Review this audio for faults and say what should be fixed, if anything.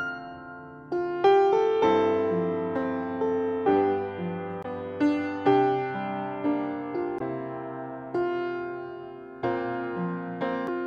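Damaged data in the compressed stream is the fault here. Stretches of the encoded data arrived wrong, so the decoder misread or rejected the affected frames, lost sync and had to hunt for the next valid frame header before decoding could resume. Each break is a brief disruption in the sound: at 4.61 to 4.66 s, at 7.17 to 7.22 s, and a shorter one at 10.67 s. To prevent this, add checksums or error correction to the transport and retransmit or conceal damaged frames before they reach the decoder.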